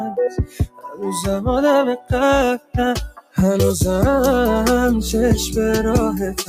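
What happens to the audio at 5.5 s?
At 5.5 s the sound is still under the noise suppressor applied to music or sounds, which acts from start to finish. A speech-oriented suppressor treats sustained tones, ambience and decay as noise, letting onsets through but pulling held material down by around 10 dB, so the level pumps and tails thin. On a waveform the envelope dips right after each attack. A spectrogram shows sustained bands and reverb fading out early and unevenly.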